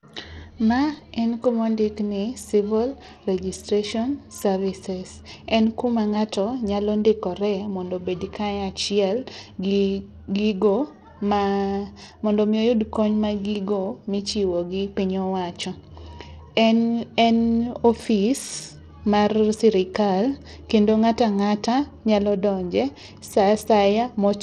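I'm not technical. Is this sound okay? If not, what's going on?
No. Throughout the speech, the high, crisp sounds flicker or vanish under a gritty haze, most likely from Bluetooth SBC compression, which sounds rougher and grainier than simple muffling.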